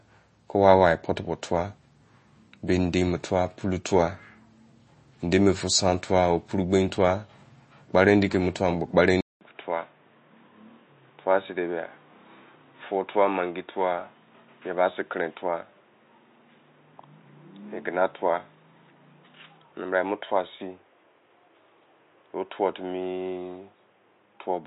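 Speech throughout sounds watery and swirly, with treble gone above 8.3 kHz, likely MP3 compression at a low bitrate around 32 kbps. From 9.21 s, after a 200 ms silence, the sound turns boxy and about 5 dB quieter, with nothing above 3.8 kHz and faint new background noise, likely the input switched to a poorer device.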